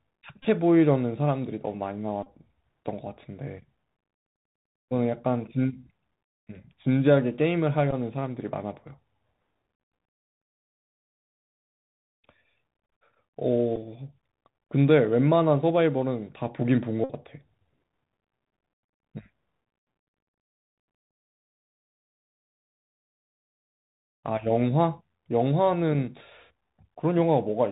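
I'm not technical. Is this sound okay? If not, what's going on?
No. Bluetooth CVSD headset codec, throughout: the speech passed through the basic codec that Bluetooth headsets use for calls. It keeps nothing above 4 kHz, so the speech sounds muffled and phone-like, s sounds come out scratchy, and a grainy hiss sits underneath.

Bluetooth headset packet repeated, at 0.42–0.45, 2.23–2.27, 7.91–7.93, 13.76 and 17.04–17.11 seconds: small chunks of sound were lost between the headset and the phone, and the last good chunk was replayed to fill the gap. The short ones are brief bursts of buzz. The longest, at 17.04, is a short buzzy stutter.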